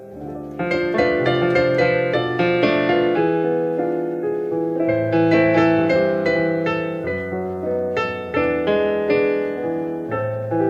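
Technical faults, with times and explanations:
Nothing here to flag; the audio just sounds the way it should all the way along.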